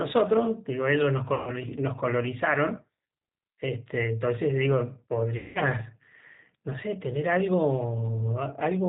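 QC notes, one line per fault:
Throughout, G.729 codec: the band stops at 4 kHz, and speech has a slightly rough, synthetic edge, which points to 8 kbit/s G.729A. The decoder rebuilds each 10 ms frame from a vocal tract filter, a pitch predictor and a few pulses, so fine detail is approximated rather than carried.
1.34–1.51 s and 5.37–5.59 s, VoIP packet loss concealed by the speech codec: about 130 ms and then 180 ms of audio go missing. The decoder stretches its last pitch and filter into a buzzy tone or coloured noise that fades. Because each frame builds on the previous one, speech stays weak briefly after packets resume.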